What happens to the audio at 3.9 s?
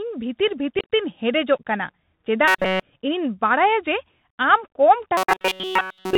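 At 3.9 s the speech carries the Bluetooth CVSD headset codec throughout: one-bit delta coding, fitting a 64 kbps stream, cuts everything above 4 kHz, roughens s sounds and adds granular hiss, seen as a flat spectrogram ceiling.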